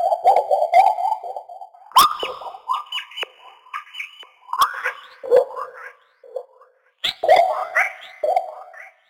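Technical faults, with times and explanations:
throughout: crude rate conversion. Unfiltered sample dropping, consistent with 48 kHz to 44.1 kHz, leaves an inharmonic fizz roughly 25 dB down that tracks loud, bright sound, unlike steady hiss.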